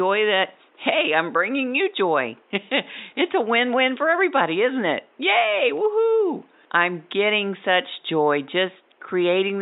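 No technical faults can be heard anywhere in the recording.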